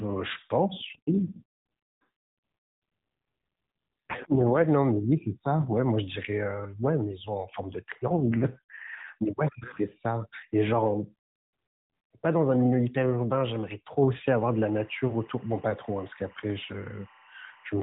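From 0.76 to 4.66 s and again from 8.08 to 9.18 s there's an AMR rate drop. The speech turns rougher and more synthetic with no gap or bandwidth change, which fits the AMR-NB codec falling from 12.2 to 4.75 kbps to protect a weak link.

From 14.26 s to the end there's timecode bleed, a steady chirping warble sitting roughly 30 dB under the speech. It flips between tones near 1 and 2 kHz, which points to linear timecode at 23.976 frames per second leaking in from a neighbouring line.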